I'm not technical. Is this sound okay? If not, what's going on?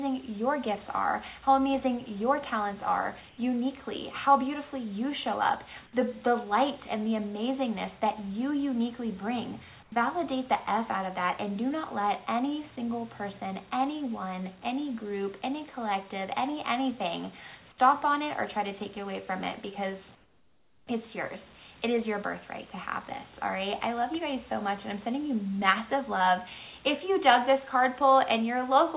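No. In three quiet moments the natural background gives way to a flat, smooth hiss: briefly at 3.29 to 3.38 s and 9.83 to 9.92 s, then for about three-quarters of a second from 20.15 to 20.87 s, where it also drops clearly quieter. This is comfort noise in place of the background, likely because the call system stopped sending sound during pauses and the receiving end filled the gap with made-up noise. The call line also cuts everything above 4 kHz.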